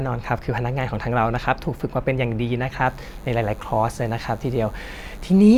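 From 2.86 s to the end of the speech, a DECT cordless phone buzz appears: radio bursts at 100 Hz get rectified in the audio circuit, giving a thin harmonic-rich buzz well below the speech level.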